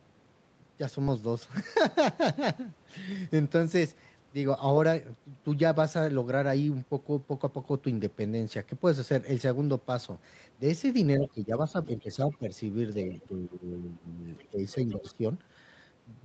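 Things go wrong in the last few seconds, from 11.18 s on, in a cluster of speech suppressed in double talk. The talker's level sinks by about 10 dB at 11.18 to 11.54 s, again at 11.72 to 12.54 s, and for a longer stretch at 13.09 to 14.24 s. It drops deeper, by about 15 dB, at 14.5 to 15.23 s. The speech goes dull and patchy in those spans, ducking in and out. That is most likely the echo canceller hearing both ends at once and clamping down on everything, the talker included.

Around those dips, the other side's voice leaking through shows up as short, faint scraps. The first is at 11.22 to 11.29 s, about 15 dB under the talker. The next is at 12.31 to 12.37 s, around 25 dB down. The last two are at 14.37 to 14.49 s and 14.9 to 15.11 s, both roughly 30 dB down. They are most likely the leftover loudspeaker echo that the canceller didn't fully scrub out of the mic.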